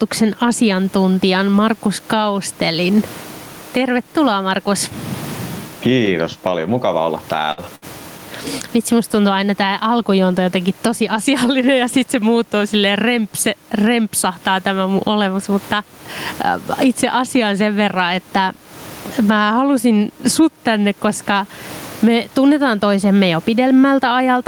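Throughout the clip the level swings by around 15 dB, and the background room noise sits about 34 dB below the speech. This is gain pumping, likely from input gain set too high with a fast limiter clamping it on every peak.

Right after "paljon mukava olla", at 7.51 to 7.60 s, the last sound is briefly held and fades, and then the audio jumps ahead. It happens again at 7.75 to 7.85 s. Both are bursts of packet loss: the receiver stretched the last audio for 59 and 65 ms while turning it down, and about 60 ms of the real signal never arrived each time.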